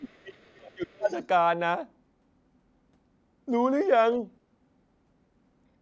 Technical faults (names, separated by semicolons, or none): speech suppressed in double talk; other side's voice leaking through